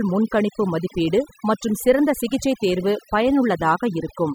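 Overdone noise removal runs throughout: an aggressive denoiser cuts frequency bands near its noise estimate, leaving near-silent, twinkling gaps.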